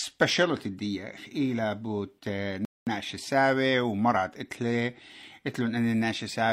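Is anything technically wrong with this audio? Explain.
Yes. From 2.65 to 2.87 s the speech halts in a rebuffering stall: playback ran out of downloaded audio and waited about 0.22 s for more. Unlike a dropout, nothing is skipped. The speech resumes exactly where it stopped, with silent time inserted.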